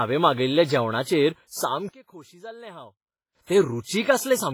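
Across the whole speech clip there is heavy codec damage: a ringing, washy character, with quantisation noise smeared over tens of milliseconds around each sound and a hiss that rises and falls with the signal. This is likely WMA compression at a low bitrate, in the region of 24 kbps. Weak spectral lines have been discarded, although content still reaches up to about 21.4 kHz.

From 1.89 s to 3.35 s, just after "मागयल्ल्या जेवणाचेर", the level drops by about 22 dB, and the background falls away along with the speech. What remains is only a residue of the original sound. That pattern points to one channel inverted, most likely: with one stereo channel in reversed polarity, everything common to both cancels in the mono sum, leaving only the small differences between the channels.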